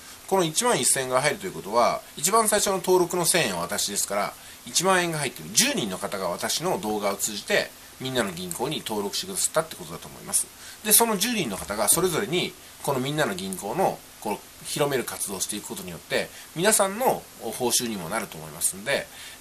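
Throughout, the sound is dull and gurgling, with a granular roughness and upper frequencies that seem to come and go. The likely cause is MP2 compression at a rate that fits around 80 kbps. MPEG Layer II divides the signal into 32 sub-bands and shares out a limited bit budget, so upper bands are dropped and the remaining bands are coarsely quantised, which is plainly audible here.

From 2.37 to 2.69 s, 6.84 to 7.18 s and 10.19 to 10.49 s, brief bursts of noise blips sit over the sound. This is DAB burbling. Bit errors, at a rate of only a small fraction of a percent, slipped past error correction into the MP2 data. Corrupted samples put short blips of noise into single sub-bands.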